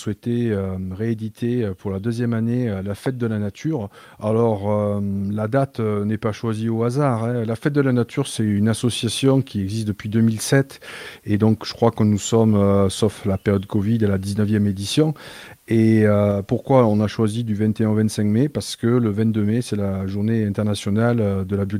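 At 3.06 to 3.08 s a single loud pop sits on top of the sound, peaking about 10 dB above it. A brief voltage pulse, likely from a plug, switch or static discharge, entered the signal path, giving one sharp thump while the audio continues underneath.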